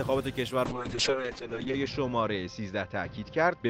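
From 0.66 s to the end, the call's bandwidth estimate collapsed and the encoder was forced onto far fewer bits, a call bitrate drop consistent with a fall from 32 kbps to 6 kbps. The coarser coding makes the sound rough and watery, and the audio bandwidth narrows from 20 kHz to 8 kHz, so the top end is cut away and everything turns muffled. The lowest rate holds for about 1.09 s, and the sound does not fully clear before the clip ends.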